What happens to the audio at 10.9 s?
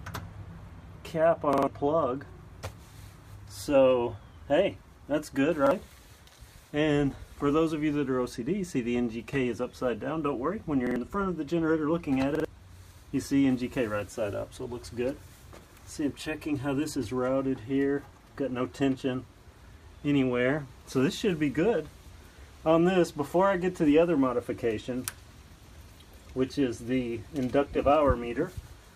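At 10.87 s the audio hits a repeated buffer that lasts until about 10.96 s. New audio did not reach the output in time. The device filled the gap by replaying its last block. That block is about 46 ms long, which fits a 2048-sample buffer. It sounds twice more, with a hard join at each restart. The result is a brief stutter, and roughly a tenth of a second of fresh audio never plays.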